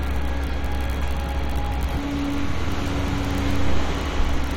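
At 1.96 s and again at 3.78 s there are brief glitches from damaged data in a compressed stream, each lasting only about 10 ms. In both places a stretch of the encoded data was corrupted, so the decoder misread those frames and had to find its place again at the next valid frame.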